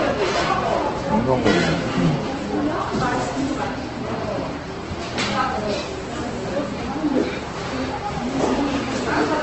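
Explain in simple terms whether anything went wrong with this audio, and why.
Yes, something went wrong, and it lasts the whole clip: the everyday sounds here come across grainy, rough and noisy rather than clean, and everything above about 8.2 kHz is simply missing, so the audio lacks sparkle and air. That combination points to heavy Opus compression, likely at a very low setting. What separates it from MP3 damage is the lack of watery, swirling gaps. Opus fills those holes with noise, which is why the texture turns gritty.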